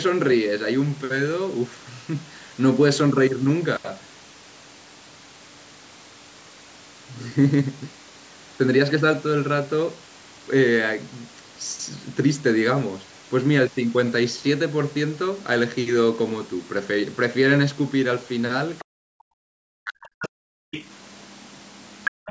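Right around 18.8 s there's a tiny scrap of the other side's voice leaking through, only about 50 ms long and sitting well under the talker. That's most likely the far end coming out of the loudspeaker and sneaking past the echo canceller into the mic. Immediately after, from 18.82 to 20.61 s, the talker's speech gets suppressed in double talk. For roughly a second and a half, spread across that stretch, the voice sinks in and out, at its deepest by something like 40 dB, so it sounds chopped and pushed away. The likely cause is both people talking at once: the canceller couldn't separate the local voice from the echo and clamped down on all of it. Around and after that, more of the far side leaks in, a short blip at 20.22 to 20.28 s and a longer bit from 20.71 to 20.95 s, both about 15 dB under the speech, then a steadier leak from 21.2 s to the end at a somewhat lower level. Near the very end, from 22.11 to 22.26 s, you get background gated by the echo canceller. 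The room tone drops out for about 150 ms, down by about 40 dB, and then comes back. That's the canceller slamming the mic shut while the loudspeaker is playing and then letting go.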